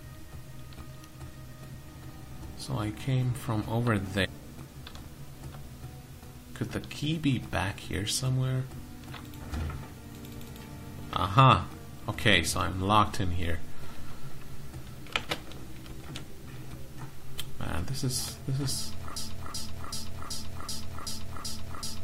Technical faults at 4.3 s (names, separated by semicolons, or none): stream segment skipped